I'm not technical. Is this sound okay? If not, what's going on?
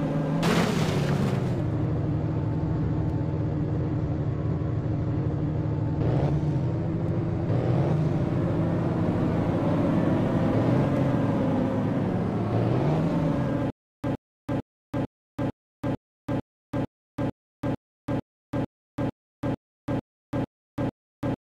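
No. From 13.7 s to the end, the player or stream likely stalled and kept retrying. The result is a stutter with silent gaps: the same 0.11-second fragment repeats 17 times, about every 0.45 s, with dead silence between, and the real audio is lost.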